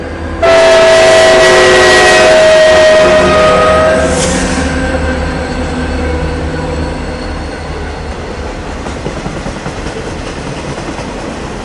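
No technical faults occur at any point in these everyday sounds, so there is nothing to describe in time order.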